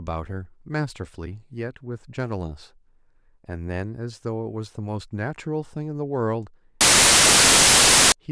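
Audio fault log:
6.81–8.12 s, file tags played as audio: the speech gives way to a hard-edged blast of very loud white noise for about 1.3 seconds. An embedded cover picture got decoded as if it were samples, and compressed image data looks random, so it comes out as pure static.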